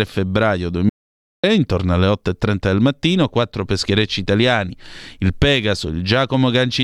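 From 0.89 s to 1.44 s the speech drops out to silence for about 0.54 s, most likely from the input link failing while writing continued. Unlike a noise gate's dip, the gap is silent with no room tone, and it cuts in and out abruptly.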